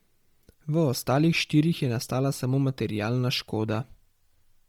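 Throughout the speech, the highs sound thinned and swapped for a grainy, breathy hiss, pointing to heavy Bluetooth LC3 compression as the likely cause, consistent with roughly 32 kbps and 10 ms frames. A spectrogram would show patchy, noise-filled upper bands changing every frame.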